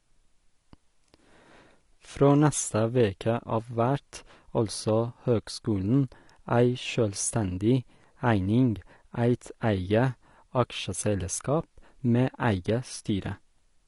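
Throughout the clip the speech sounds dull and smeared. Nothing reaches above 11.1 kHz. Sibilants carry a fizzy, warbling texture. The likely cause is AAC compression. The coder cuts high bands and coarsely quantises the rest, which points to a low bitrate around 32 kbps.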